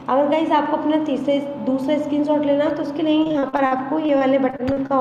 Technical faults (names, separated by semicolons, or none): repeated packet loss (robotic sound)